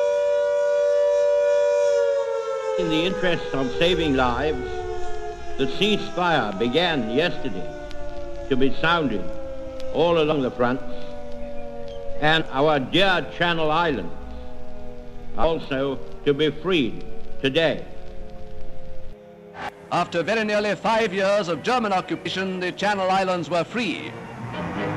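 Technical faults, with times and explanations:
10.31–10.33, 12.40, 15.43 and 22.25 s: compressed frames skipped. At each point the audio jumps forward, losing roughly 150 ms, 300 ms, 200 ms and 100 ms respectively, because whole compressed frames never reached the output. The jumps come in steps that fit a frame of about 26 ms. Nothing is filled in. That separates it from a dropout, which leaves a silent gap, and from a hard edit splice.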